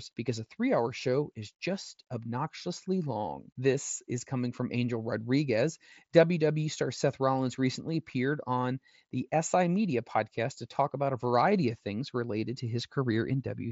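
No technical faults occur in this speech clip, which comes through the Bluetooth mSBC headset path with its band limit of 8 kHz.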